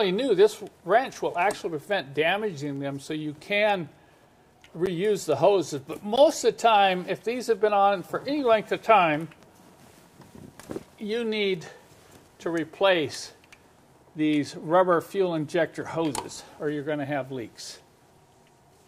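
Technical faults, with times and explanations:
4.86 s and 6.16 s, block of digital silence: twice a short run of output samples was replaced by zeros, about 10 ms at 4.86 s and about 15 ms at 6.16 s. The signal drops straight to digital silence and returns with no fade, so each edge is a sudden step in the waveform. At these lengths each gap is heard as a sharp tick or small pop rather than a clear hole in the sound.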